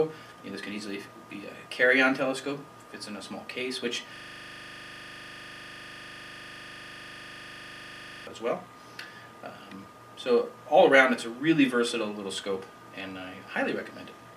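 At 4.16 s the audio locks into a system hang loop that lasts until 8.27 s. The machine or its driver stalled while the sound hardware kept replaying the same 40 ms stretch of its ring buffer, roughly a hundred times over, so the sound collapses into a steady buzz at 25 Hz. Unlike scattered underrun clicks or dropouts, the repetition is exact and perfectly periodic, with no silence between cycles.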